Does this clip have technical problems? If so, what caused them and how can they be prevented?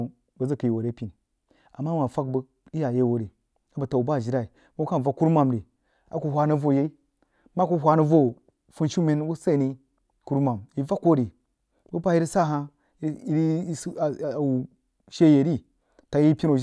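No, nothing stood out as a technical problem when listening to this speech recording, so there is nothing here that needs preventing.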